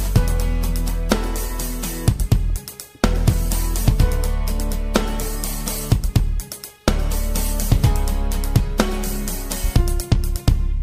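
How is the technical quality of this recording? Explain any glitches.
There is one glitch, a corrupt frame concealed, from 1.47 to 1.51 s. A damaged block of the compressed stream was detected by the decoder, which covered it by muting or reusing scrambled spectrum. The concealed stretch lasts about 30 ms, which fits a single bad frame.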